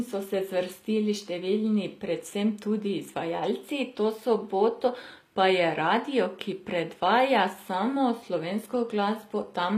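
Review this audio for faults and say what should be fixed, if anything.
The whole clip carries plainly audible HE-AAC compression damage. The treble sounds bright but synthetic, and s sounds come out gritty and lispy. Nothing is present above 15.5 kHz. This is likely spectral band replication: the upper band is rebuilt from copied lower bands under a coarse envelope, so harmonics misalign at the crossover. The damage fits a bitrate near 24 kbps. To prevent it, encode at a higher bitrate or in a lossless format.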